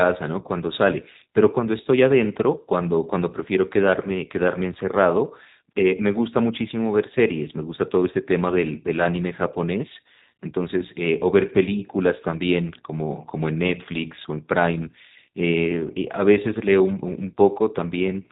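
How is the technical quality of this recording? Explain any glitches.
The recording has clearly audible codec damage from start to finish. Throughout, G.729 coding limits the speech to a 4 kHz band and makes it rough and synthetic, which fits an 8 kbit/s G.729A stream. The codec rebuilds each 10 ms frame from a vocal tract filter, a pitch predictor and a few pulses. A simple low-pass filter would only dull the sound. This codec leaves the speech grainy and artificially buzzy.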